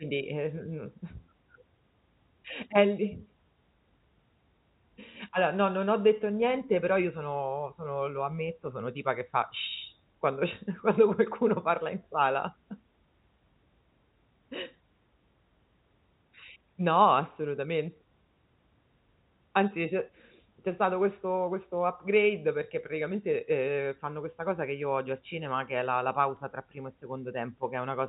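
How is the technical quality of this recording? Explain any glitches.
No glitches: the speech sits in a telephone band that stops below 4 kHz, consistent with G.711 A-law coding, and the faint level-tracking quantisation noise of that format stays well down.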